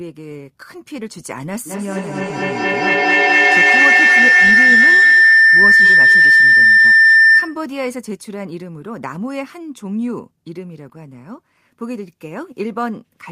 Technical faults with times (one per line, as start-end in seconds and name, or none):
1.66-7.69 feedback howl